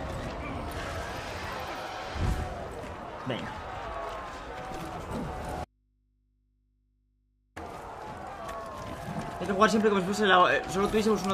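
Audio dropout to a faint residue from 5.65 to 7.56 s: the sound cuts abruptly to mains hum roughly 40 dB down. It shows as a near-flat waveform and thin low-frequency lines on a spectrogram, likely an upstream signal break.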